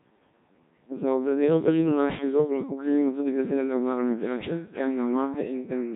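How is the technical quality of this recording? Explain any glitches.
The technical quality is poor. The speech has passed through a Codec 2 vocoder from start to finish. This vocoder does not keep the waveform. It sends only pitch, voicing, energy and a rough spectral shape. The decoder rebuilds the voice from sine waves. The damage is heavy, which fits a rate near 1.3 kbit/s. The result sounds robotic and buzzy throughout.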